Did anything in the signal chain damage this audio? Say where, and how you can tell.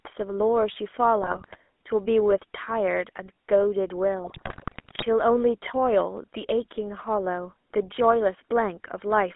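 Yes. The damage is at the codec stage, and it runs through the whole clip. This is the GSM full-rate codec. The speech has a buzzy, gravelly roughness. The band sits between roughly 250 Hz and 3.5 kHz, with nothing above. The codec rebuilds the voice from a vocal-tract filter driven by a sparse pulse train. Most of the fine excitation detail is thrown away. The artefacts are plainly audible, which fits the 13 kbps full-rate coder.

The second fault is in the network stage. GSM bit errors hit twice, from 1.22 to 1.56 s and from 4.24 to 5.05 s. In both spans the speech breaks into squawks, pops and gargling. The second burst is longer and rougher. Corrupted bits reached the decoder and garbled the filter, pitch and gain values. Each bad frame then bent the spectrum or jumped in level. The density of errors points to a bit error rate of a few percent.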